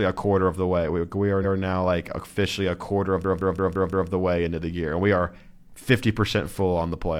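Repeated frames at 1.40 to 1.54 s, just before "now like officially a", make the speech stutter: a 139 ms block, consistent with a run of about three compressed frames, plays a second time, lengthening the audio by 139 ms. A system hang loop from 3.24 to 4.10 s, after "officially a quarter of" and before "the way into the", repeats one 171 ms slice five times at 5.86 Hz, a machine-gun stutter that fits an 8192-sample ring buffer cycling while the system froze, with little or no audio lost.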